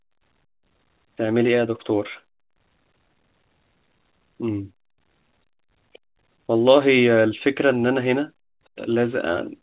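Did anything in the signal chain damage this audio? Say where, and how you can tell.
No, nothing in the chain damaged this speech; it came through a call path using G.711 A-law at 64 kbps, which is why nothing reaches above 4 kHz.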